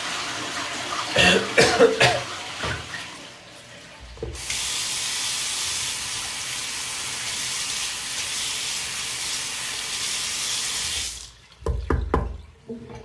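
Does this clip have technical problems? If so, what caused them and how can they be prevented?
Yes. Aliasing runs throughout: energy above 12 kHz folds back into lower, unrelated frequencies about 10 dB below the sound, consistent with downsampling to 24 kHz without filtering. Apply a steep low-pass filter below the new Nyquist frequency before reducing the sample rate.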